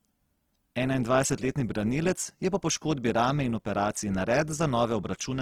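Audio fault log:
throughout, Opus compression: the speech is rough and grainy, with tones turned noisy but little swirl and no narrowing of bandwidth. The likely cause is Opus in its music mode filling starved bands with folded or noise content, which fits roughly 16 kbps.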